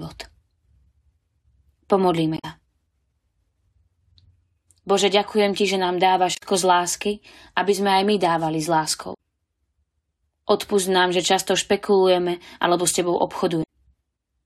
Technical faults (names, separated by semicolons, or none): damaged data in a compressed stream